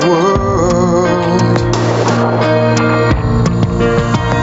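Throughout, gain pumping: the gain swings around 10 dB, likely a fast limiter fighting excessive mic gain; the waveform shows a breathing, flattened envelope. The spectrogram ends near 8 kHz from the call path.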